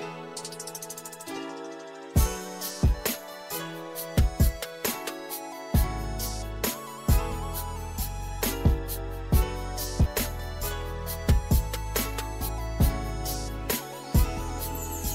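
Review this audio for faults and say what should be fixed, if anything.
Compressed frames are skipped at 10.05 s and 12.48 s. At each point the audio jumps forward by roughly 50 ms, about two frames of 26.1 ms each, because the decoder either never received those frames or discarded them as corrupt. Unlike a buffer dropout, there is no silent gap, and unlike a splice click, the join is a short smeared blip, because the overlapping frame windows blend across the missing span. To prevent it, verify file integrity after transfer and re-encode or re-fetch the damaged frames.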